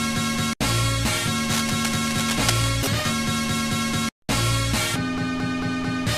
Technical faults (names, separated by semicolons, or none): cable scratch noise; call audio freeze